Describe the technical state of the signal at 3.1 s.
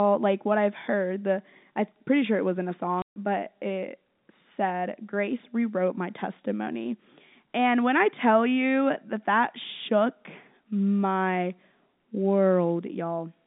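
At 3.1 s the signal sits inside a packet loss filled with silence, 3.02–3.16 s, between "sure it wasn't a" and "but it said". Missing packets were replaced by 140 ms of silence, which fits seven 20 ms packets. It shows as a flat waveform gap and a blank spectrogram column.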